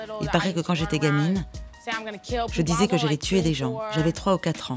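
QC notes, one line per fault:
No faults found. Nothing in the clip needs a QC entry.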